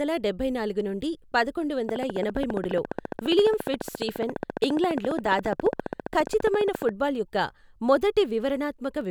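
A speech recording carries a steady train of clicks from 1.89 s to 6.90 s, starting just after "డబ్బై నాలుగు నుండి పదకొండు". The clicks are evenly spaced at 14.6 per second, about seventy in all, each sharply popping well above the speech, roughly 15 dB louder, and ticking through pauses too. The near-identical shape and fixed rate likely point to interference from nearby equipment or a faulty connection or power supply injecting repeated pulses into the signal.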